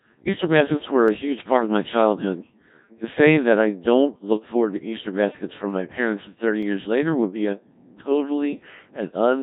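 Speech heard through the Codec 2 vocoder, with heavy damage throughout: the voice is rebuilt from pitch, voicing and a spectral envelope, so it sounds robotic and buzzy, which fits a very low bitrate around 1.3 kbit/s. On a spectrogram, harmonics look smeared and synthetic, and the waveform bears little resemblance to natural speech. Sharp single clicks occur at 1.08 s after "baskets were", at 5.70 s between "baskets from" and "my parents", and at 6.63 s just before "years later would be". They are likely dropped samples, each a tiny fraction of a millisecond of missing audio, and each shows as a thin vertical line on the spectrogram and a sudden step in the waveform.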